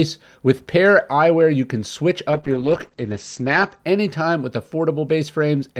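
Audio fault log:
2.34–3.85 s, call bitrate drop: after "you can switch" the sound turns rough and muffled until "anytime with". The bitrate, likely cut after a lower bandwidth estimate, falls from 48 to 10 kbps for about 1.36 s, coarsening coding and narrowing bandwidth from 20 kHz to 8 kHz.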